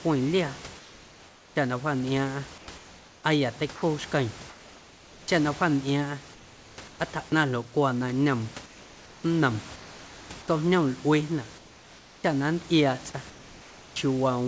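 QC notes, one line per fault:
0.78–1.56 s, 2.58–5.28 s, 6.34–7.00 s, 8.66–10.30 s, 11.58–12.24 s, 13.30–13.96 s: comfort noise in place of the background. Pauses turn to flat, featureless hiss, some about 4–6 dB quieter, likely from discontinuous transmission. On the spectrogram the background texture becomes a smooth, even wash.
3.76–3.82 s: sound dropped by the voice detector. About 40 ms of speech gives way to steady noise, likely misjudged as background. The waveform shows a brief envelope dip to the noise floor.
12.21 s: onset clipped by the voice detector. Speech resumes abruptly, its first 30 ms lost to noise, likely a slow detector. The waveform shows a hard vertical attack without a ramp.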